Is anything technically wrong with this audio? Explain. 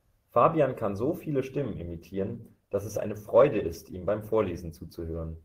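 Yes. From 1.56 s to the end, the adaptive stream drops to a lower bitrate, likely after the connection slowed, so codec artefacts rise and the quality changes suddenly without any gap, consistent with roughly 16 kbit/s Opus.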